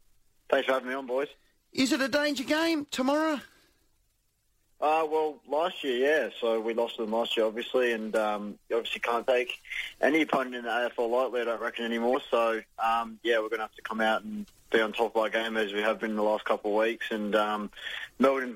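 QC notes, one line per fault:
8.82 to 8.86 s and 12.11 to 12.15 s, damaged data in a compressed stream: two short glitches, each about 44 ms long, where a stretch of the encoded stream arrives corrupted. The decoder misreads or rejects the frames at that point, loses its place, and scans ahead for the next valid frame header. Each is heard as a brief chirp, squawk, click or short hole in the sound.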